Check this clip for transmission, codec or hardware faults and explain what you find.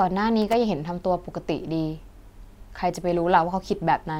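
There is one hardware fault. From 0.42 to 0.54 s, loose connector crackle: a worn contact rapidly making and breaking chops the speech into irregular scratchy bursts.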